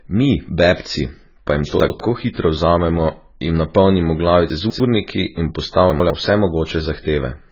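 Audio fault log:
throughout: AAC compression, heavy. Nothing is heard above 7 kHz, so the speech sounds dull and smeared. Sibilants fizz and sustained sounds warble. This fits a low-bitrate AAC-LC stream, likely near 16 kbps, where bands are dropped or filled with noise.
1.8 to 2.0 s, 4.5 to 4.8 s, 5.9 to 6.1 s: chunks out of order. At each spot a 100 ms piece of audio plays late, after pieces that should follow it. The first comes after "bebci pa jim to" and just before "hitro vzamemo jim napolnimo". The second comes just after "hitro vzamemo jim napolnimo". Each is heard as a brief jumble.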